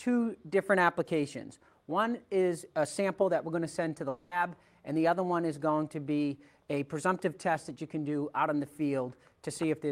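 From 4.09 to 4.33 s the sound gives way to a fading buzzy smear, then resumes with about 220 ms missing, likely a long network dropout. The spectrogram shows blurred, decaying bands in that gap.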